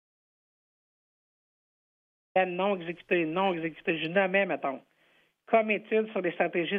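From the very start until 2.36 s there is dead silence, with no room tone at all, before the sound comes in mid-flow: an audio dropout to silence. Silence was written while the input was likely lost, through a disconnected device, failed link or stray mute.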